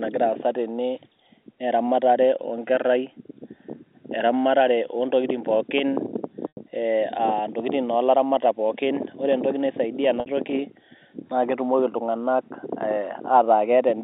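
Packet loss with pitch repetition at 6.49 to 6.57 s and 10.20 to 10.26 s: the receiver repeats the last pitch period to cover about 90 ms and 60 ms gaps.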